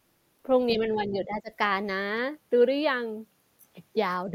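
From 0.75 to 1.51 s the speech sinks in patches, about half a second of it turned down by roughly 10 dB at worst. This is speech suppressed in double talk, likely an echo canceller mistaking the talker for loudspeaker echo while both sides spoke.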